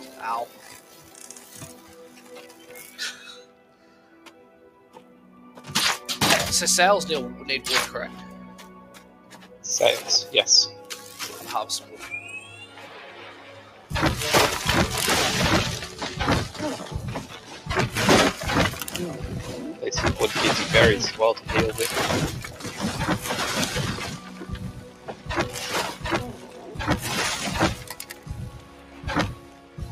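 A noise suppressor built for speech was left running on this audio, and it treats steady tones, ambience and decaying tails as noise to be removed. Throughout the clip its gain swings by around 10 dB, so sustained material pumps and thins while sharp attacks pass largely intact, giving the sound an unstable, breathing level.

In several places the sound was cut by the noise suppressor outright, turned down more than the rest. The longest stretch runs from 0.48 to 5.24 s, where roughly three seconds of it sinks by up to about 7 dB. Shorter dips follow at 8.83 to 9.57 s (about 6 dB), 13.62 to 13.91 s (about 5 dB), 17.33 to 17.66 s and 22.50 to 22.79 s (both about 6 dB). From 24.17 to 26.71 s about a second and a half is pushed down by up to about 7 dB, and from 27.79 s to the end the suppressor clamps again by up to about 7 dB, swallowing held sound and cutting its decay short.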